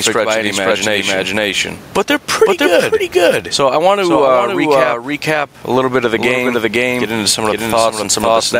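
A doubled audio track runs through the whole recording. Every stretch of speech is heard twice. The second copy trails by about half a second and sits at roughly the same level as the first. It is full-band and dry, with no decay or room colour, so it is not an echo. This likely comes from the signal being captured a second time through a slower path, with both copies mixed together.

Gain pumping is also present from start to finish. The input gain is set far too high, and a fast limiter or compressor clamps down on each loud syllable. The level swings by roughly 15 dB. The background sits about 34 dB below the speech. Loud and soft parts end up squashed close together. This is likely caused by excessive gain feeding that fast gain control.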